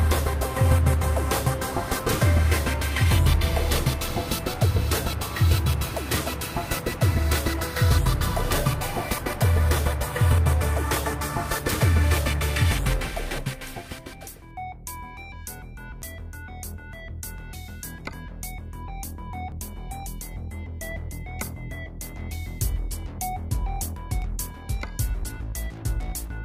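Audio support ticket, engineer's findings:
Skips ahead at 16.02, 19.52, 24.22 s, losing about 40, 20, 20 ms, no gap. Likely dropped buffer (overrun): capture read late, data overwritten.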